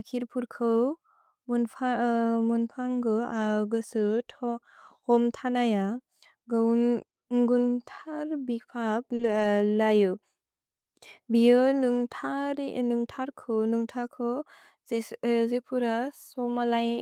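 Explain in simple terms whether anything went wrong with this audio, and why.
Around 9.15 to 9.21 seconds there is a short concealed packet loss. About 40 milliseconds of sound never arrived in time. The receiver filled the gap by stretching the sound just before it, so you hear a brief smear or wobble there.

Overlapping that, from about 9.19 to 9.45 seconds, comes a lost packet rebuilt from error correction. Several separate pieces went missing, about 140 milliseconds in total. Each was replaced by a rougher backup copy sent along with the next piece. Nothing drops out, but those moments sound grainier and noisier.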